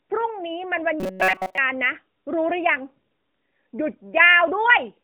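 A speech recording carried over a narrowband mobile line, with nothing above about 3.5 kHz and the light coloration of an AMR narrowband codec. From 1.00 to 1.58 s the sound turns into robotic sound from repeated short buffers, a rigid metallic buzz at 188 Hz. That figure points to a block of roughly 5.3 ms being replayed in place of most of the real audio, likely because fresh data arrived too late to fill the output.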